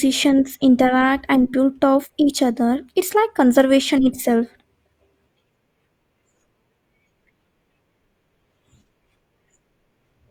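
Nothing in this speech recording jumps out as a technical fault, so there's no problem to point to anywhere along the way.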